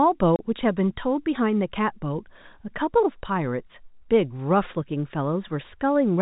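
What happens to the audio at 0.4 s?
Packet loss filled with silence runs from 0.36 to 0.39 s. A 30 ms stretch of the speech drops out, which points to a single missing packet, and the receiver plays silence in its place, so the sound cuts to a hard-edged hole.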